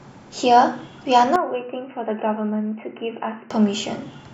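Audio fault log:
1.36 to 3.51 s, input switched to a poorer device: The speech suddenly turns dull and boxy, then clears again at 3.51 s. Nothing above 3 kHz gets through in this stretch. The level drops by roughly 10 dB. A faint new noise floor sits far below the speech. There is no gap at either switch. The likely cause is the recording input moving to a narrower-band microphone or headset call profile, then back.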